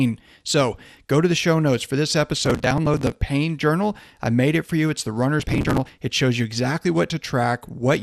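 The speech sounds dull throughout, with a gurgling, granular edge. The likely cause is MP2 compression at a low rate, which fits about 80 kbps. Too few bits switch upper sub-bands off. Those that remain are coarsely quantised.

From 2.37 to 3.16 s, after "show notes for this" and before "journal I made it", there is processor overload crackle. Dozens of short audio buffers, about 5 ms each, miss their deadline and are skipped. Each leaves a hard-edged gap. Together they sound like gritty tearing.

The same crackle returns from 5.40 to 5.91 s, with even more skipped buffers.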